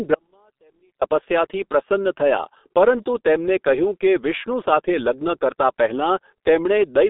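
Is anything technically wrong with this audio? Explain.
Yes. From 0.14 s to 1.02 s the speech vanishes abruptly for about 0.87 s, leaving only faint sound roughly 40 dB below normal before it snaps back. This is an audio dropout to a faint residue, likely a break in the wanted signal while the path stayed live.

Throughout, the speech sounds muffled and hoarse, with smeared consonants and nothing above 3.7 kHz. The thin band, roughly 250 Hz to 3.6 kHz, and coarse 30 ms frame updates point to heavy G.723.1 codec damage at around 6 kbit/s.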